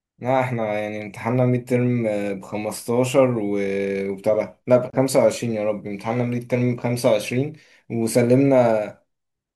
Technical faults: gap at a join of encoded pieces

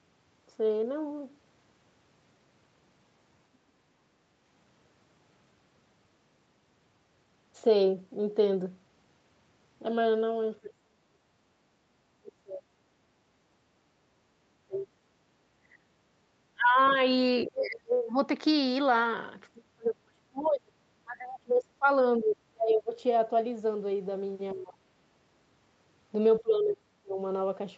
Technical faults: speech suppressed in double talk; background gated by the echo canceller; other side's voice leaking through

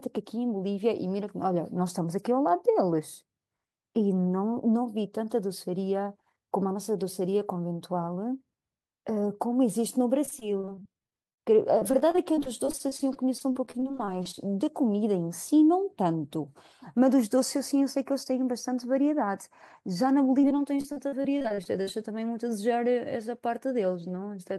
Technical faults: repeated packet loss (robotic sound)

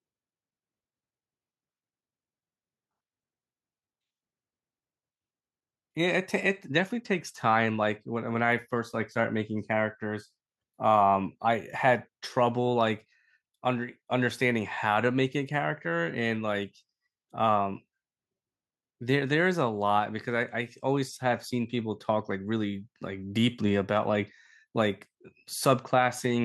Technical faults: none

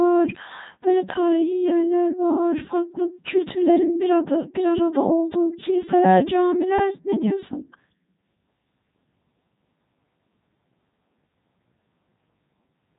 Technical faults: Codec 2 vocoder

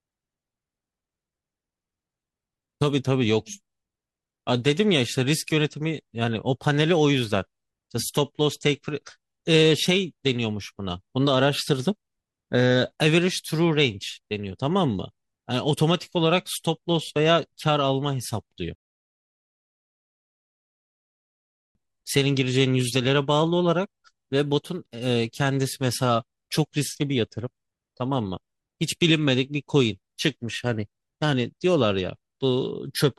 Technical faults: rebuffering stall

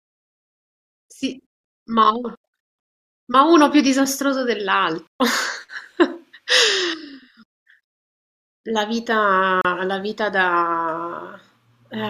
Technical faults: digital broadcast dropout

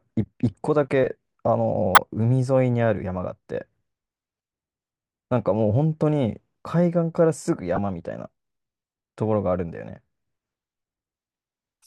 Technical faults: corrupt frame decoded

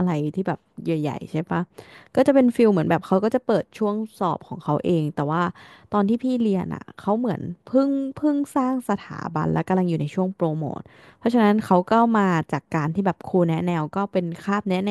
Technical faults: none

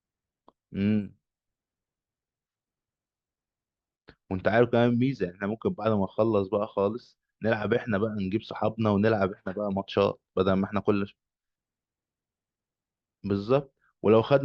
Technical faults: none

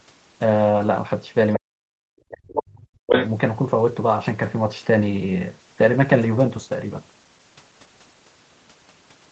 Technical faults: other side's voice leaking through; speech suppressed in double talk; call bitrate drop

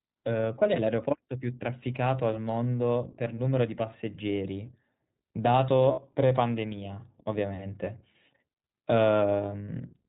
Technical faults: iLBC codec; lost iLBC frames

